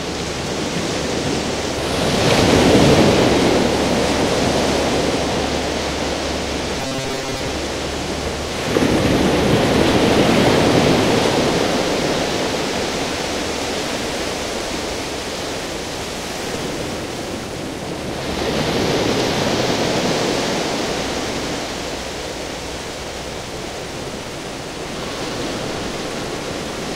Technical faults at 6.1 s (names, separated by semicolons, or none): none